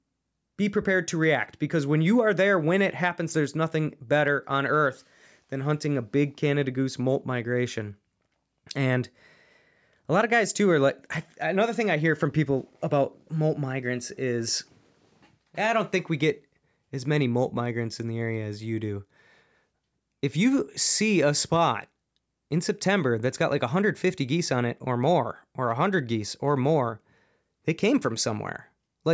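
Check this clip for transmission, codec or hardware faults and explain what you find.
Nothing in this speech recording points to a fault in how it was carried, encoded or captured. A close listen turns up no event worth flagging.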